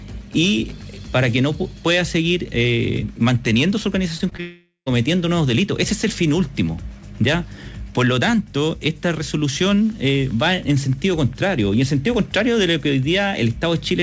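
The audio has a cluster of brief smears right before a longer gap, where the sound turns into a fading buzz or hiss and then goes quiet. The first three events, at 4.18 to 4.22 s, 4.30 to 4.33 s and 4.37 to 4.40 s, are short concealed packet loss. Each time about 20 ms of audio failed to reach the decoder in time, and the receiver patched the hole by extending the preceding sound for roughly 13 to 17 ms before blending back into the real signal. This produces the small wobbles heard there. Immediately after, from 4.40 to 4.88 s, comes what is likely a long network dropout. About 460 ms of audio never arrived, so the receiver kept stretching the last sound into a decaying buzz or hiss, leaving silence for roughly the final 0.13 s before the audio resumes with that stretch missing. The audio was carried over a WebRTC call path with the G.722 codec at 64 kbps, and nothing is present above 8 kHz.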